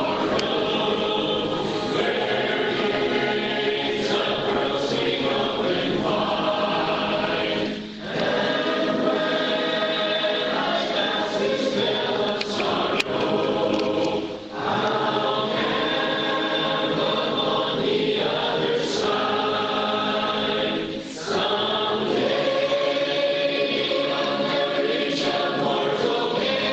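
No technical faults can be heard anywhere in the recording. There is no moment where the sound breaks, jumps or changes in a way that points to a problem in the chain.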